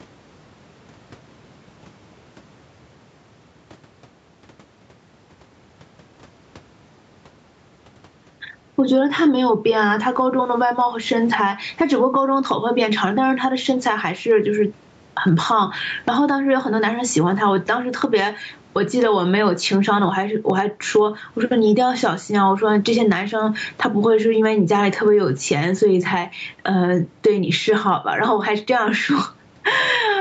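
Gain pumping runs throughout the speech: the gain swings by something like 15 dB. This is likely caused by gain set far too high, with a fast limiter clamping down on each peak and squashing the dynamics.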